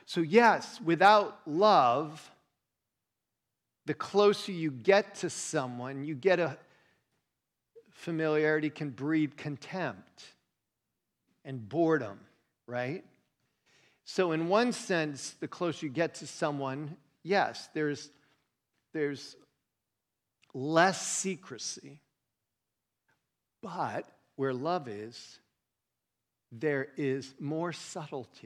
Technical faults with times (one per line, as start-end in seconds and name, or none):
none